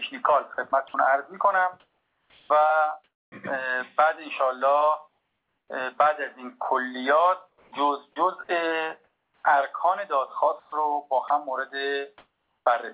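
From 0.54 to 3.32 s the sound is chopped by the voice detector. About 1 s of quieter passages becomes comfort noise, so the sound turns choppy. This is likely a detector switching on and off repeatedly.

From 5.08 to 5.7 s comfort noise replaces the background. The real background gives way to flat synthetic hiss about 7 dB quieter, likely because transmission paused during silence.

From 5.68 to 5.70 s the onset is clipped by the voice detector. The sound starts abruptly, its first 20 ms missing, likely from a detector reacting late.

From 7.48 to 12.66 s the choppy pattern returns, with about 1.3 s replaced by comfort noise. The whole clip stops at 4 kHz, as a G.711 call path would.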